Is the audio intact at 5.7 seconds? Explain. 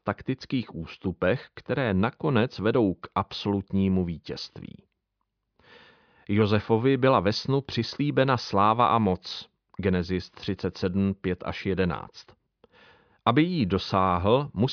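Yes, the speech at 5.7 seconds plays through intact, with no dropout, click, distortion or other fault.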